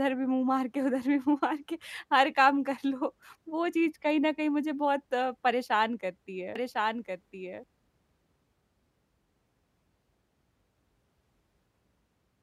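Speech with a doubled audio track from 6.56 to 7.64 s: a dry copy about 5 dB quieter trails by roughly one second, likely from a second, slower capture path.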